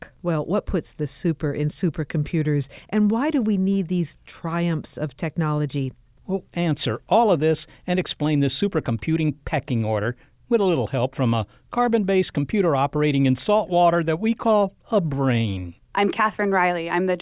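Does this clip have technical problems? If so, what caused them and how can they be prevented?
No, this clip has no technical problems, so there is nothing to trace to a cause or prevent.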